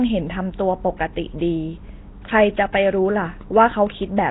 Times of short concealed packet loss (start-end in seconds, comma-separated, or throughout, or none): none